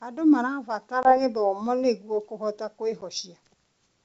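Packet loss on an ADPCM call strikes this speech recording at 1.03 to 1.18 s and again at 3.01 to 3.04 s. About 20 ms (a couple of packets), then 10 ms (a single packet), drop to hard-edged silence. The decoder's adaptive predictor and step size fall out of step with the sender's, so the speech comes back slightly distorted until it resettles. The G.722 wideband coding carrying the call keeps the speech clear up to 7 kHz.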